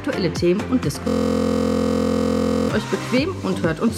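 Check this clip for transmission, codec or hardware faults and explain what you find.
One fault turns up, a system hang loop. From 1.08 to 2.69 s, a steady 43.1 Hz buzz replaces the audio: a 23.22 ms fragment repeating 69 times as a frozen system left the hardware cycling one buffer, which fits a 1024-sample buffer.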